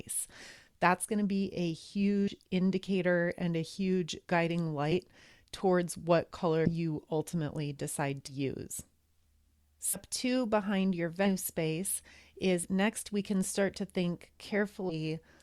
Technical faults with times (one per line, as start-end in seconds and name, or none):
2.27-2.32 compressed frames skipped
4.91-4.95 compressed frames skipped
6.65-6.71 compressed frames skipped
8.27-8.33 compressed frames skipped
9.93-9.96 compressed frames skipped
11.25-11.30 compressed frames skipped
12.63-12.67 compressed frames skipped
14.89-14.94 compressed frames skipped